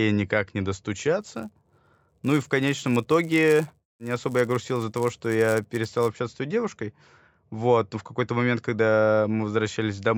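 The resampler restarted on every block from 1.21 to 6.11 s, after "никак не" and until "с той девушкой". Each 10 ms block was converted separately, which fits an upsampling from 16 kHz to 48 kHz, so the filter had no true neighbouring samples at each block edge and left a small error there. Those errors repeat at 100 Hz, producing a rough buzz under the speech that is present only while sound is present.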